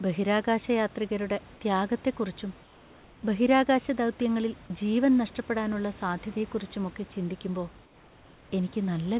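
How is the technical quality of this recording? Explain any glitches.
The recording has two short patches where the real room background is replaced by synthetic noise. The audio also stops at 4 kHz, which fits a narrowband telephone codec such as G.711, and it carries room noise about 26 dB below the speech.

From 2.63 to 3.23 s and again from 7.85 to 8.51 s, the pauses turn into comfort noise in place of the background. The room's natural texture gives way to a steady, featureless hiss about 2 dB quieter, and the real background returns when sound resumes. The likely cause is discontinuous transmission. The sender stops sending during silence, and the receiver fills the gap with generated noise that roughly matches the background's spectrum. A dropout or noise gate would leave true silence instead.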